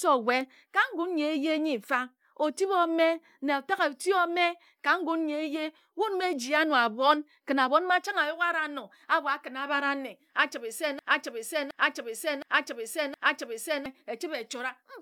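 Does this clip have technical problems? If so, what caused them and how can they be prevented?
Yes. From 10.99 to 13.86 s, right after "achibe se", a broken-record loop repeats a 0.72 s fragment four times, likely a stalled stream resending its last buffer. Prevent this with stall detection that inserts silence instead of replaying stale audio.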